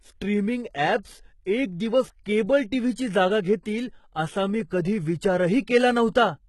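From start to finish the speech has a gritty, metallic top end: s sounds come out lispy, and the treble sounds synthetic, with nothing above about 11.8 kHz. The likely cause is heavy HE-AAC compression, at a rate that fits around 16 kbps. Only the lower spectrum is truly coded; the upper bands are copies of lower ones shaped by a coarse envelope, so their harmonics clash with the real ones beneath.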